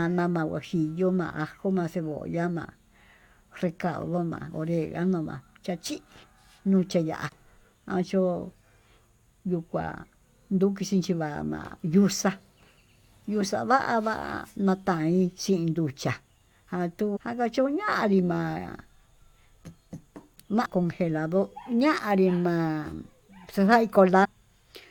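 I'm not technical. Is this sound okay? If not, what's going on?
No. The speech has four short blips from damaged data in a compressed stream, at 7.27–7.30, 17.15–17.17 (just before "akachuñanrí ma'a"), 20.65 and 24.23–24.26 seconds. At each, the decoder hit garbled data and briefly lost track before recovering.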